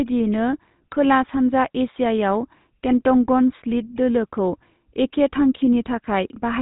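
Speech run through the GSM full-rate codec from start to finish, with plainly audible buzzy, gravelly roughness from pulse-driven vocal-tract modelling; a spectrogram shows nothing above about 3.8 kHz.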